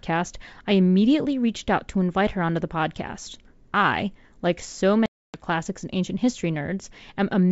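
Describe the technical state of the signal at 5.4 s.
At 5.4 s the signal is inside a packet loss gap on an ADPCM call. The gap runs from 5.06 to 5.45 s, after "podcast I like so". About 280 ms of audio is missing, around fifteen packets, replaced by hard-edged silence. The receiver's adaptive predictor and step size lose track of the sender's. Speech resumes at "and ancient history" slightly distorted. It settles within tens of milliseconds.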